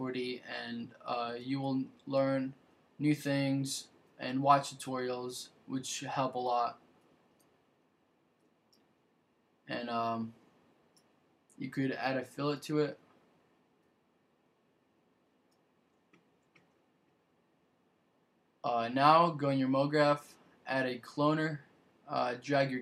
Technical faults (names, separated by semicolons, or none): none